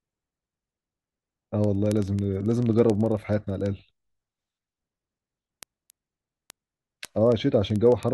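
From 0.11 s to the end of the speech, word clock ticks recur at a steady rate, roughly every 50 ms. The receiving device runs on its own clock, a few hundred parts per million off the sender's, so each slip drops or repeats one sample.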